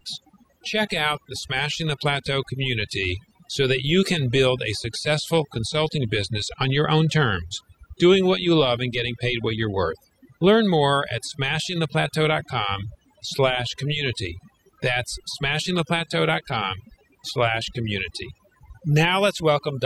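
Throughout the speech, overdone noise removal is audible. An overly aggressive noise reducer cut away narrow bands near its noise estimate, taking soft parts of the voice too. Gaps become near silence with twinkling specks; a spectrogram shows scattered isolated dots and ragged, holed harmonics.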